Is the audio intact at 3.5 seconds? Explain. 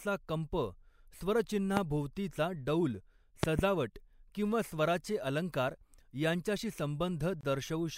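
No. A loud pop runs from 3.43 to 3.61 s, two sharp pops in quick succession, roughly 20 dB above the speech, which continues underneath. A voltage pulse from a plug or switch is the likely cause. The waveform shows two tall spikes, and the spectrogram shows bright vertical lines spanning all frequencies.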